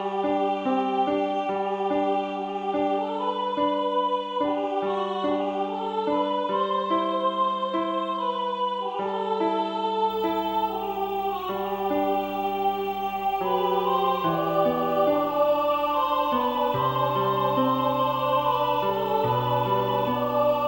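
At 10.10 s a video or display buzz starts and runs to the end. A screen or video cable is coupling into the audio path. It sounds like a 59.94 Hz buzz with hash above it, plus a thin 15.7 kHz whine, roughly 25 dB below the signal.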